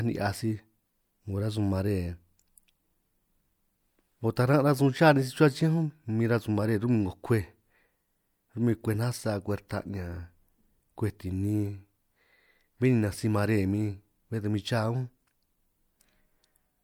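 At 4.36 s a brief hiss sits just ahead of a sharp onset in the speech, softening its attack. This is pre-echo: the transform codec spread quantisation noise across its block, leaking into the quiet 10 ms before the transient.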